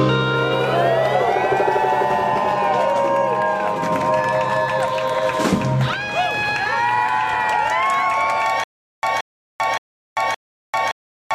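From 8.64 s to the end, a 175 ms burst repeats four times every 569 ms with 394 ms of silence between: stutter with silent gaps, likely a stalled player or stream replaying its last fragment.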